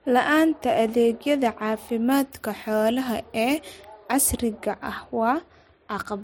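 Speech clip. From 2.11 to 4.11 s, pre-emphasis is left on: a CD 50/15 µs treble boost goes uncorrected, lifting 10 kHz about 8 dB. The sound turns thin, bright and sibilant.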